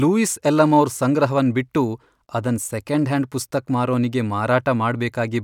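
No technical faults can be heard anywhere in this speech recording.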